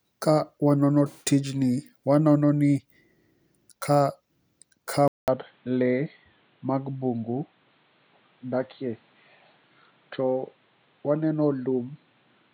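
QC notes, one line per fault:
5.08 to 12.53 s, input switched to a poorer device: after a 200 ms silence the speech loses everything above 4.4 kHz and gains a new noise floor about 40 dB down, level unchanged, likely a switch to another microphone. The gap and fresh noise floor distinguish it from a codec bandwidth drop.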